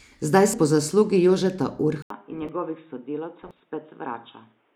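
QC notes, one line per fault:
0.44 to 0.54 s and 3.42 to 3.60 s, compressed frames skipped: in both places the audio jumps forward by roughly a tenth of a second, the first time just before "po zaslugi". Whole frames of the compressed stream were never played, either missing or rejected by the decoder as damaged, and the skipped material is simply gone.
2.02 s to end, input switched to a poorer device: after a gap of about 80 ms the sound turns dull and boxy, with nothing above 3.8 kHz, the level down about 10 dB, and a new background noise floor sitting roughly 40 dB under the speech. Together these point to a likely change of input partway through recording, to a narrower-band microphone or headset call profile with its own tone and noise.
2.30 to 2.49 s, corrupt FLAC frame: an error peaking at about −28 dBFS lies over the speech, and its length fits damage spanning two frames. Flipped bits in the frame went undetected because the checksum was not checked, so the decoder's prediction ran on wrong values from the damaged point until the frame boundary. 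The next intact frame decodes cleanly and the error stops.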